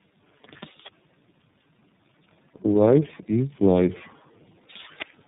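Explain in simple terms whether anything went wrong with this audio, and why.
Tandem speech coding affects the whole clip. The speech sounds rough, muffled and warbly, more than one phone link alone would cause. That points to the call passing through several phone-network speech coders in a row, probably about three. At each handover the speech is unpacked and squeezed again, and every coder has to work on the already damaged output of the one before. Nothing is left above about 3.8 kHz, which is why it sounds dull.

Automatic gain rising happens from 2.65 s to 4.04 s. Over roughly a second and a half, the speech and the background noise get louder together. This happens because an automatic volume control decided the input was too quiet and slowly turned it up. It can't boost the speech alone, so the background rises with it.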